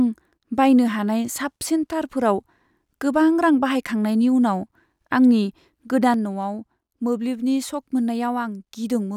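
At 6.14 s the speech and its background noise drop together by about 6 dB in a single step and stay there to the end. This sudden gain jump likely comes from a digital gain change applied without a ramp.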